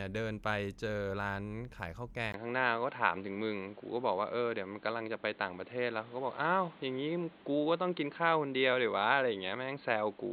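At 2.32 s a 20 ms gap gives way to dull, boxy speech with nothing above 4.5 kHz, a level step of around 5 dB and new noise roughly 30 dB down, likely the input switched to a poorer device. Spectrogram: flat 4.5 kHz ceiling; waveform: gap, then step.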